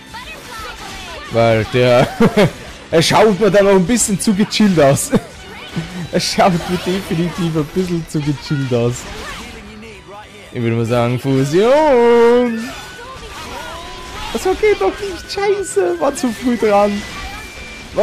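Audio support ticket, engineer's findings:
Hard clipping throughout. Signal driven about 17 dB past the stage's ceiling; peaks cut flat, roughly 4% of samples affected. Flat tops generate high harmonics. Heard as harsh fuzz on every loud sound. Probable cause: excess gain before converter or fixed-range stage.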